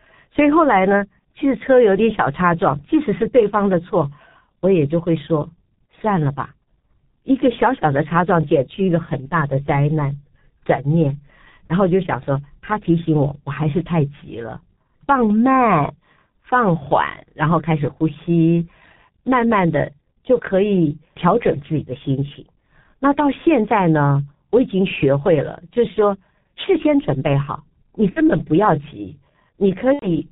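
From the start, the audio passes through the G.723.1 codec, which fits its 6.3 kbit/s mode. Nothing above 4 kHz survives, and the slowly updated voice model leaves the speech heavily muffled and hoarse, with smeared consonants.

At 1.21 s, VoIP packet loss concealed by the speech codec leaves a gap of about 30 ms, which fits one lost frame. The decoder carries its last pitch and filter forward, briefly stretching the sound out. The same happens at 28.10–28.21 s, with about 60 ms lost, and at 29.93–30.16 s, with about 90 ms lost. In both places the sound stretches into a buzzy tone or coloured noise that fades, and the speech stays weak or distorted for a moment afterwards.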